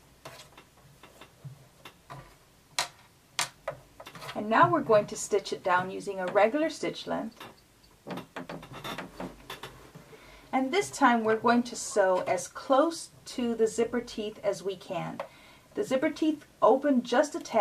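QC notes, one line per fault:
No audible faults found in this clip.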